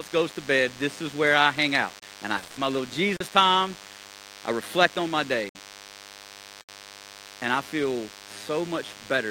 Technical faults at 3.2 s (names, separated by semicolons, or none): DECT cordless phone buzz; block of digital silence